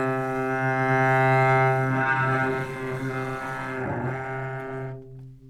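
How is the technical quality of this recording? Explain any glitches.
No glitches or signal faults can be heard anywhere in this recording of sounds, so the technical quality is intact throughout.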